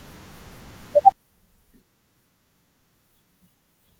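From 1.12 s to the end, one channel inverted is the likely cause: the mono sum cancels, dropping the speech about 21 dB into a faint remnant.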